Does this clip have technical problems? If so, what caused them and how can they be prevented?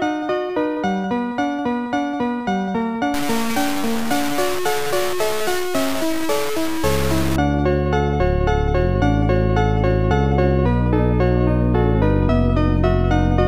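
Yes. From 3.14 to 7.36 s the audio turns grainy and gritty, with distortion that tracks the sound and quiet passages sputtering or dropping out. The likely cause is low bit depth without dither: the signal was truncated to very few levels, which fits a 4-bit word, so the error is only roughly 10 dB below the signal. On a waveform the section shows visible stair-steps. A spectrogram shows signal-dependent hash spread across the band. To prevent it, keep adequate bit depth, and apply dither whenever reducing it.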